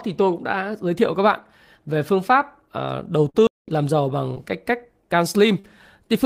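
At 3.29 s there is a burst of packet loss lasting until 3.36 s. Several packets in a row failed to arrive in time. The receiver stretched the last sound for about 46 ms, fading it as a held buzz or hiss. About 40 ms of speech is then skipped.

At 3.47 s the audio drops to silence for about 207 ms, resuming at 3.68 s. This is a playback stall. The player was likely starved of data or blocked. The speech halts mid-flow, then carries on.

Short concealed packet loss occurs at 4.34 s and again at 5.60 s. Brief stretches of the stream arrived too late to decode. The receiver extended the preceding sound, about 17 ms and then 39 ms, before blending back. Each is heard as a quick smear or wobble.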